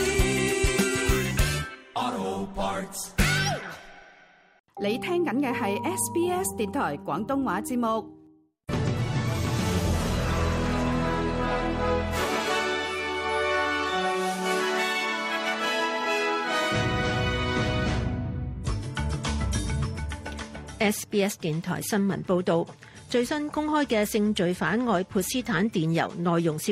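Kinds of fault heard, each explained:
No faults can be heard in this recording.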